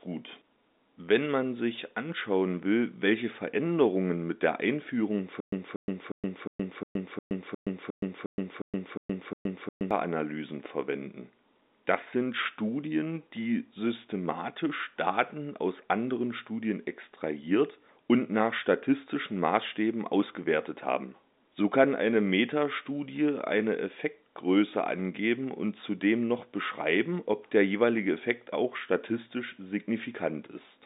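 From 5.40 to 9.91 s the speech falls into a stutter with silent gaps. A 237 ms fragment plays, then 120 ms of dead silence follows, and the pair repeats 12 times at a steady 357 ms period, so the sound freezes into a mechanical loop. This is likely a stalled stream replaying its last buffer at each retry. On a waveform it shows as identical blocks separated by flat silent stretches. The spectrogram repeats the same pattern in columns, with nothing above the telephone band's 3.8 kHz ceiling.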